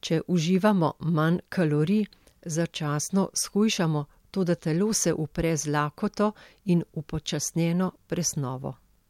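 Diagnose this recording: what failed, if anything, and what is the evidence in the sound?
Nothing stood out on listening to the speech in this recording.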